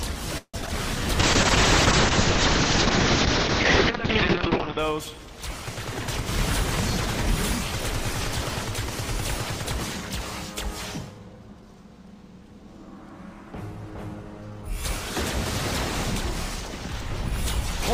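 From 0.38 to 0.71 s there is repeated packet loss (robotic sound): four gaps in quick succession, the longest 160 ms. The receiver bridged each hole by extending the last sound it had, about 175 ms in total, while another 60 ms simply dropped out. Roughly half of this short span is concealed rather than real audio, so it comes across as choppy, with pieces clipped out.

A call bitrate drop follows at 1.21 s and lasts until 4.85 s. The encoder's target fell from 48 kbps to 6 kbps and stayed at the floor for about 3.6 s. At that rate Opus narrowed the coded bandwidth from 20 kHz to 6 kHz, so the top end disappears and the remaining sound turns coarse and watery. The muffling lifts once the bitrate recovers near the end of the span.

Overlapping the tail of that drop, a jitter buffer slow-down runs from 4.48 to 5.17 s. The buffer was short of audio and padded itself by repeating individual pitch periods and slivers of pause, adding 50 ms. 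Playback runs at 94% speed with pitch unchanged, so sounds in this stretch are slightly drawn out.

Later, from 11.09 to 12.16 s, a jitter buffer speed-up does the opposite. The buffer held more audio than its target and trimmed short pitch-period segments one after another, removing about 150 ms in total. Playback runs at 112% speed with pitch preserved, so this second or so sounds noticeably hurried, its timing compressed relative to the surrounding audio.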